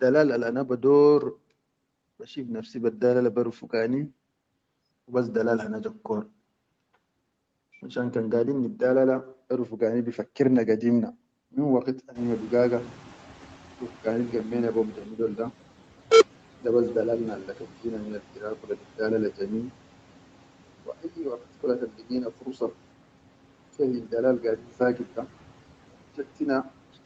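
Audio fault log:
12.15–15.52 s, noise suppressor catching up: Just after "gadir na min waqit", the room noise jumps by about 20 dB at around 12 s, to about 21 dB below the speech. The suppressor's noise estimate still reflects the quieter background, so the new noise passes through with little reduction at first. Over 3.37 s the estimate adapts and the noise sinks by about 10 dB. The result is a swell of background that then fades.
18.63–18.99 s and 21.89–22.1 s, speech cut by the noise suppressor: The suppressor mistakes low-level parts of the speech for background and turns them down along with the noise. The second event comes right after "waqit kula kan". The drops reach about 12 dB and about 11 dB, and each affects roughly a tenth of a second of speech. Those fragments sound swallowed or faint against the speech around them, while the call path's 8 kHz bandwidth stays the same throughout.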